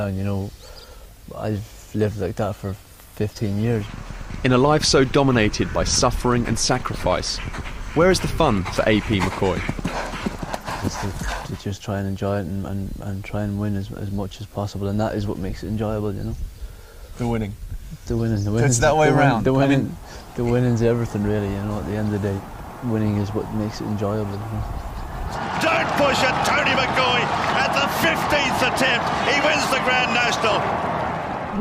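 No technical faults turn up anywhere in the clip.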